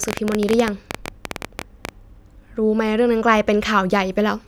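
A train of clicks runs from 0.04 to 1.90 s at the start of this speech clip. About 14 similar pulses per second arrive at an uneven pace, roughly thirty in all, each standing well above the level of the speech, around 15 dB louder, so they read as rapid popping laid over it. Repeated pulses of matching shape like this are likely caused by interference from nearby equipment or by a faulty connection or power supply.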